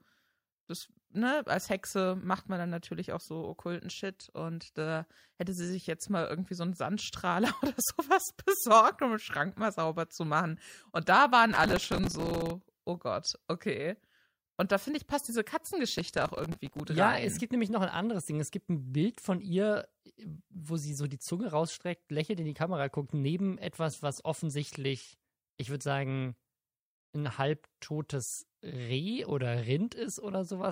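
The processor misses dozens of tiny buffers in a row and repeats stale audio, so processor overload crackle tears through the speech from 11.5 to 12.5 s and 16.0 to 16.8 s.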